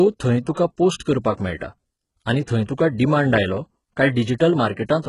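Throughout the speech, the signal has likely passed through HE-AAC compression at a very low bitrate, one that fits roughly 12 kbps. The encoder kept only the lower spectrum and rebuilt the treble by copying lower bands upward under a coarse envelope, with nothing at all above about 11.1 kHz. The damage is heavy: the synthetic top end doesn't match the true harmonics, so s sounds come out gritty, metallic and lispy.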